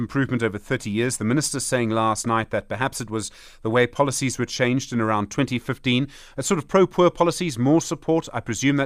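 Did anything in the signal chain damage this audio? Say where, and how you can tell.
No, no signal-chain damage heard.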